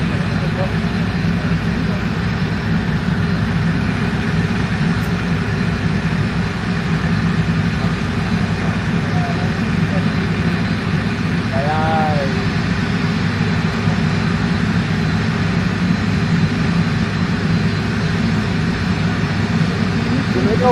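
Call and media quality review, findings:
No faults found on review. Nothing to escalate from this clip.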